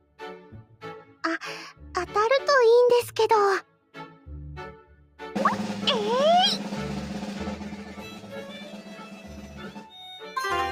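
The level pumps and breathes throughout, with sustained parts sinking and recovering by about 10 dB while sharper onsets stay fairly intact. This is a noise suppressor applied to music or sounds: a processor built for speech is treating steady, held and decaying content as background noise and turning it down, so the gain keeps swinging as it changes its mind about what counts as signal.

Several passages are noticeably pulled down in level, most clearly: 0.01 to 0.19 s (drop of about 11 dB), 0.63 to 0.82 s (about 10 dB), 1.05 to 1.23 s (about 9 dB), 3.63 to 4.27 s (about 11 dB), 4.76 to 5.19 s (about 8 dB), and the long stretch from 7.58 to 9.94 s (about 11 dB), where the sound stays thinned and sunken for around two seconds. Each is sound cut by the noise suppressor, which judged these steadier or fading portions to be noise and attenuated them well below their neighbours.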